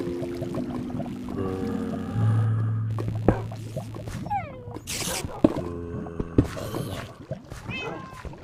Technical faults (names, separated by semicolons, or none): computer activity noise